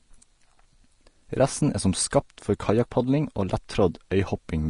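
Throughout the speech, the treble sounds hissy and grainy, nothing remains above 10.5 kHz, and consonant onsets are smeared. This plainly audible damage likely comes from low-quality Vorbis compression, whose coarse treble quantisation trades fine detail for noise, consistent with roughly 35 kbps.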